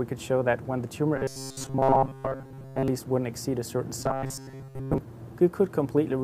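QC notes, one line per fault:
1.17 to 2.88 s and 4.00 to 4.98 s, robotic sound from repeated short buffers: the sound turns into a stiff, metallic buzz pinned at 134 Hz that still loosely tracks the original contour. This is likely from audio arriving too slowly, so playback keeps looping the last slice, about 7.5 ms long given the buzz pitch, while most of the real material in these stretches goes missing. That fixed loop length sets the drone.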